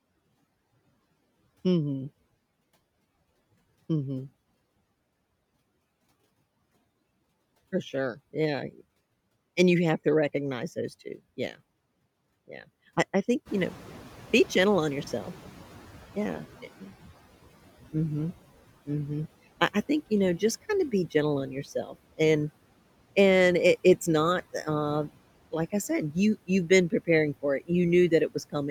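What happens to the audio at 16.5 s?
The noise suppressor is still catching up at 16.5 s, near the end of a span from 13.45 to 16.71 s. Room noise jumps by about 15 dB at around 13.5 s, and the suppressor's noise estimate takes 3.26 s to adjust. The noise therefore comes through with less reduction at first, then sinks by about 11 dB. On a spectrogram, the noise floor between words brightens suddenly and then fades gradually toward 16.71 s.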